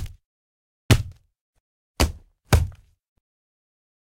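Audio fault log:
0.00–2.73 s, sample clock jitter: the converter's timing wanders by something on the order of ten microseconds, so each sample lands slightly early or late. Steep, fast-moving parts of the waveform suffer most, leaving a grainy hiss that tracks loudness and brightness, sitting roughly 20 dB under the sound itself. On a spectrogram, a diffuse noise haze rides beneath the strongest and highest components and vanishes in quiet gaps; the waveform looks fuzzy rather than clipped.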